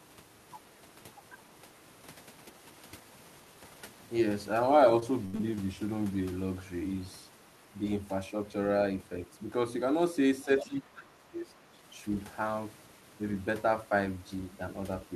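A speech recording with three kinds of transmission fault. From 4.99 to 5.59 s there is repeated packet loss with a robotic sound: four gaps, about 160 ms missing in total, the longest 75 ms. Each gap is bridged by extending the preceding audio, so about a quarter of that stretch is synthetic fill, heard as choppy speech. From 10.37 to 10.67 s the other side's voice is leaking through at roughly 10 dB below the talker, likely residual far-end echo that the echo canceller failed to remove from the loudspeaker pickup. A much fainter scrap of it appears at 10.85 s. Overlapping this, from 10.64 to 11.55 s, the talker's speech is suppressed in double talk. The level dips by around 25 dB at its deepest, with roughly a second affected, likely because the canceller could not separate the near-end voice from the echo and attenuated both.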